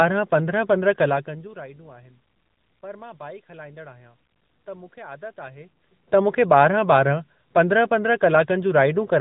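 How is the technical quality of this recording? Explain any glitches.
The quality is limited by mobile-phone coding along the whole clip. The AMR narrowband mobile codec fault runs from start to finish. Nothing above about 3.8 kHz comes through, so the speech sounds boxed in and dull. AMR-NB rebuilds the voice from a vocal-tract model excited by a few pulses per short subframe. At this rate the damage is plainly audible: a buzzy, synthetic edge that fits a mid-range mode near 10 kbps.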